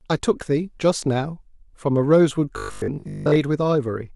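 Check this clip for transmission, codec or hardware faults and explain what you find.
One transmission fault is present in this speech clip: robotic sound from repeated short buffers, from 2.58 s to 3.36 s. Across that span the speech becomes a rigid, metallic buzz fixed at 50 Hz, loosely tracking the syllables. The likely cause is audio arriving too rarely, so the playback side loops the last chunk, about 20 ms, to fill the gaps. Most of that stretch is filled with these repeats, and the skipped real audio is lost.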